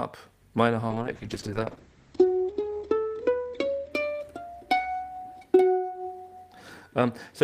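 From 0.91 s to 3.97 s there is a call bitrate drop. The encoder was forced down to far fewer bits, and the coarser coding makes the sound rough and watery. Its top end also narrows from 20 kHz to 8 kHz, which dulls and muffles it. The worst stretch lasts about 2 s. The degradation points to the rate falling from roughly 32 to 9 kbps before the bandwidth estimate recovers.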